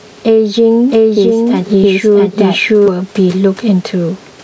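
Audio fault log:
Throughout, gain pumping: the background swells in gaps and ducks by around 10 dB under each loud sound, likely from excessive input gain driving a fast limiter.
0.92 to 2.88 s, doubled audio track: a dry full-band copy, about as loud as the original, trails by roughly 0.7 s and cuts in and out abruptly, likely from a slower second capture path.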